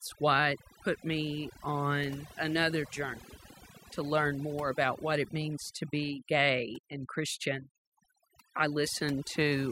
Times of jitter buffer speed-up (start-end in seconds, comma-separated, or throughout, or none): none